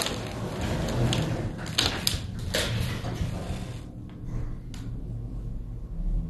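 An everyday-sound recording carrying MP2 compression damage from start to finish, and it's plainly audible. Nothing makes it above 12.2 kHz, so the top end sounds dull, and what's left has that gurgling, granular texture you get when the 32 sub-bands are starved of bits, with bands dropping in and out and the survivors coarsely quantised. It's likely a low-rate Layer II encode, something around 64 kbps.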